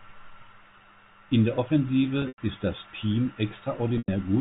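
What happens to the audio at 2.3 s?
Packet loss with pitch repetition from 2.22 to 2.38 s: the receiver loops the last pitch period, so the speech buzzes, fades to silence, then returns before "ist das".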